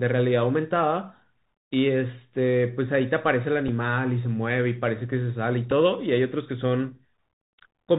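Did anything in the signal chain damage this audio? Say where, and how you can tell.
Yes. Across the whole clip the speech sounds boxed-in and narrowband, with nothing above 4 kHz. Sibilants come out scratchy, loud bright syllables break up, and a grainy hiss sits beneath the voice. That is the Bluetooth CVSD headset codec, a codec-stage fault. Its one-bit-per-sample delta coding, which fits a 64 kbps stream, can only step the waveform up or down, so fast high-frequency movement outruns the adaptive step and distorts.

Two small ticks interrupt the speech, at 3.68 s and again at 5.71 s, each lasting about 3.8 ms. These are Bluetooth headset packet repeats, a fault on the wireless link between headset and phone. Each sounds like one lost packet whose gap was filled by decoding the previous packet's bits a second time. Because neither loss extends into a run, there is no sustained buzz, just a brief glitch where the repeated fragment fails to line up with what follows.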